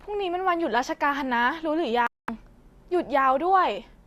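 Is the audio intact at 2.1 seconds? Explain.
No. At 2.1 seconds the speech falls inside a digital broadcast dropout running from 2.07 to 2.29 s. The receiver stopped getting usable frames, either because the signal was lost or because frames failed their checksum. It muted until good data returned. The result is a hole of about 216 ms of silence, which fits roughly nine lost frames. The speech then resumes further on, and whatever was sent during the gap never comes back.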